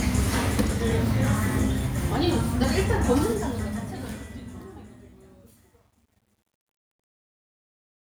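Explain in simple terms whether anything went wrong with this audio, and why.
The fade-out starting around 3 s has truncation distortion: from 3.22 s it turns gritty, and from 4.65 s to the end it is at its worst. The fade kept too few steps, about 10 bits' worth.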